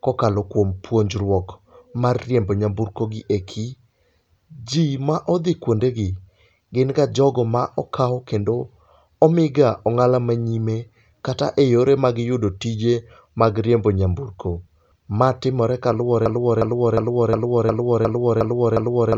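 At 16.26 s the speech locks into a broken-record loop: a fragment about 0.36 s long repeats exactly, back to back, eight times, and the loop runs to the end of the clip at 19.17 s. The stutter is mechanical and evenly spaced, with no variation between repeats. This likely comes from a stalled player, encoder or stream that kept resending the last fragment it held, so the speech that should have filled those final three seconds is lost.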